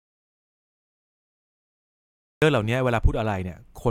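From the very start until 2.42 s, there is an audio dropout to silence. The clip opens in complete silence, with no room tone or hiss at all. The speech only cuts in at 2.42 s, already mid-flow. The input was likely lost for that stretch, through a disconnected device, a failed link or a stray mute, while silence kept being written. Whatever was spoken during those first 2.4 seconds is gone.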